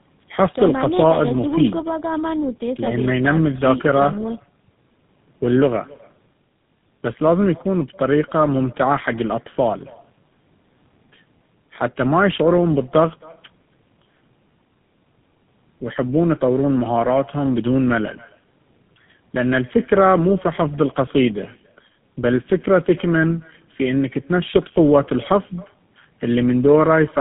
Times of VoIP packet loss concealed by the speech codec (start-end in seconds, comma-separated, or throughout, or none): none